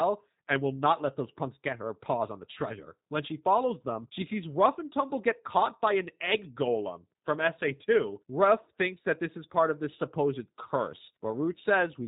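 From start to finish, the speech carries G.729 codec damage. Nothing passes above about 3.8 kHz. The speech is rebuilt from a vocal tract filter, a pitch predictor and a few pulses per frame. The result sounds rough and faintly synthetic, which fits an 8 kbit/s G.729A stream.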